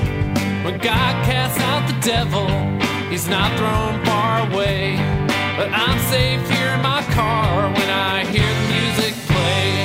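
Nothing in this audio stands out as a technical fault; there are no dropouts, glitches or other problems anywhere along the way.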